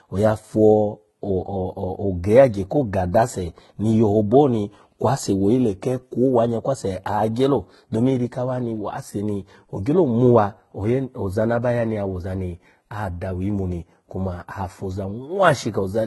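Throughout the speech, the sound carries two layers of compression artefacts at once: a smeared, swirly low-bitrate texture with a second, grainier coding noise on top, likely from transcoding between lossy codecs, which fits a very low-rate HE-AAC pass re-encoded to Vorbis. On a spectrogram, energy stops sharply at 11.8 kHz, with blotchy, patchy upper bands below it.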